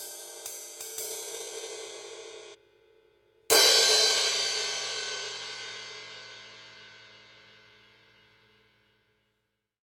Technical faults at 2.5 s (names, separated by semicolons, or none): stream segment skipped